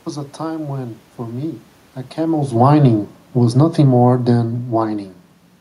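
From 2.2 s to 5.05 s there's automatic gain falling: the AGC judged the input too hot or its background noise too strong and eased its gain down by about 6 dB, so the speech and the room noise behind it sink together, unlike the talker's own shift in distance near 2 s.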